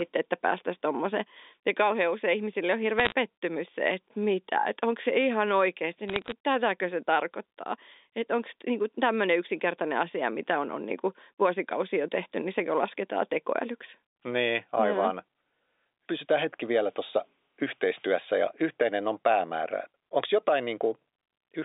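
A speech recording carried over a narrowband G.711 mu-law telephone line (roughly 250 Hz to 3.7 kHz) has two short bursts of bit errors on a digital phone line. The first runs from 2.99 to 3.12 s, right after "kauhean usein ihmisille on". The second runs from 6.08 to 6.32 s, between "onko se ihan oikeasti" and "tätäkö se tarkoittaa että". Flipped bits, at an error rate well under one percent, corrupt individual 8-bit samples. Hits on sign or high-order bits produce sharp ticks that cluster into brief crackle over the speech.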